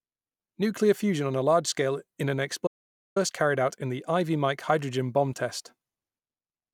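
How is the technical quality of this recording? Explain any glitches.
The recording has one clear glitch. From 2.67 to 3.16 s, after "large scale in an" and before "carried out in the", there is an audio dropout to silence: about 0.49 s of silence with no room tone, likely from the input being lost while recording continued, so that speech is missing.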